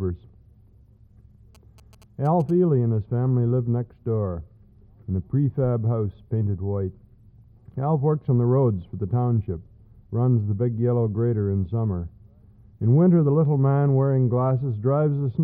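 GSM signalling bursts appear from 1.55 to 2.51 s: a nearby 2G phone's short radio bursts are rectified by the audio circuitry, giving a galloping dit-dit-dit of brief 217 Hz buzzes, sitting roughly 30 dB below the main sound.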